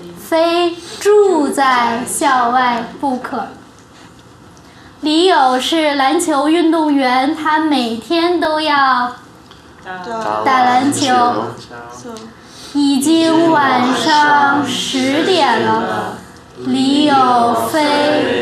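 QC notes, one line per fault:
3.02 s and 8.45 s, dropped buffer (overrun): a small forward jump in the sound, no gap of silence. Likely a buffer overwritten before it was read, losing a few milliseconds and butting the two sides together.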